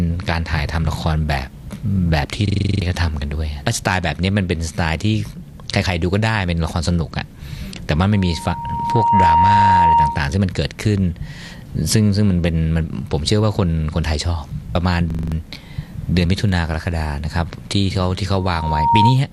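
At 2.48 to 2.82 s a system hang loop repeats one 42.67 ms slice eight times, a harsh stutter at 23.4 Hz that fits a 2048-sample ring buffer replayed while the driver froze. Roughly 0.3 s of real audio is lost. The waveform shows identical blocks side by side, and the spectrogram shows vertical stripes at the loop rate. A shorter hang from 15.10 to 15.32 s loops a 42.67 ms slice five times, losing about 0.2 s.

From 8.11 to 10.37 s a loudspeaker feedback squeal appears. A 932 Hz tone swells over about a second as the microphone picks up its own loudspeaker and the loop gain passes one. It ends about 5 dB above the programme and shows as a single brightening horizontal line on the spectrogram. It returns at 18.33 to 19.21 s, building in about half a second to about 10 dB above the signal.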